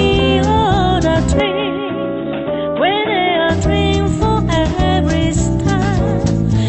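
From 1.40 to 3.50 s the sound turns dull and slightly quieter, likely an input switched to a poorer device. The spectrogram goes empty above 3.8 kHz and the waveform shrinks.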